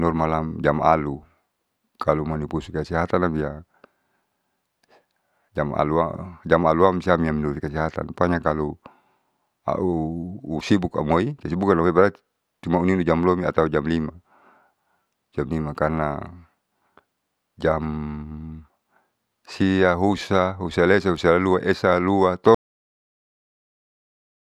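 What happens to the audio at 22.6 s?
The speech stops abruptly at 22.55 s, a cut-off end: the final buffers were never written, so the sound halts mid-utterance and drops straight to digital silence until 24.41 s. The waveform shows a flat line from that point, and the spectrogram goes fully black with no decay tail.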